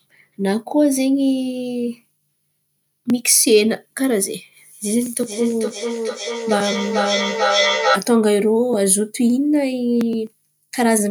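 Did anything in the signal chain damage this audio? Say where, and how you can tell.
Yes. From 5.22 to 8.09 s the speech comes round again at roughly 400 ms intervals, each repeat thinner and more ringing, peaking at about -1 dB relative to the speech. That is feedback echo between two devices, a call-processing fault. A second device's loudspeaker is re-entering a microphone whose echo canceller cannot remove it. Room reverberation would smear the sound rather than repeat it at a fixed spacing.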